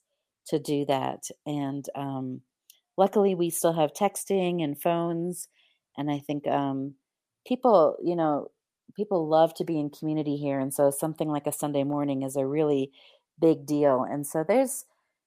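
Speech, with clock drift between sender and receiver running through the whole recording. The sender's clock runs about 1.5 percent slow against the receiver's. Audio arrives a little too slowly, so the jitter buffer keeps draining. To keep playing, the receiver has to stretch what it has. That gap in rates never closes, so the problem never settles.

The result is repeated timing corrections from 0.02 s to 14.66 s. The receiver keeps repeating short pieces to fill the shortfall. Playback runs at about 99 percent of true speed. Together the repeats add about a fifth of a second. Each edit is tiny and pushes the same way, but they fall at uneven intervals. They come across as faint hiccups and a slightly unsteady pace rather than clear breaks.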